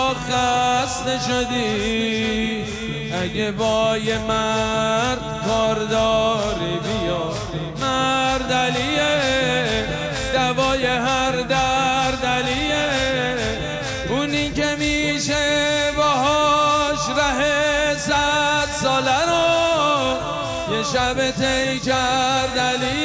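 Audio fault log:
No faults heard anywhere in the clip.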